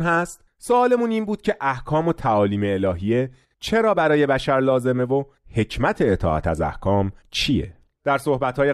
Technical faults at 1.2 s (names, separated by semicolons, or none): none